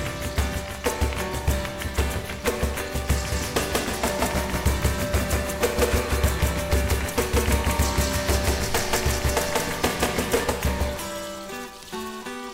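From 3.32 s to 10.44 s, a doubled audio track appears. A dry, full-band copy trails the original by about 200 ms, at roughly equal loudness. It starts and stops abruptly. The likely cause is a slower second capture path or an out-of-step edit.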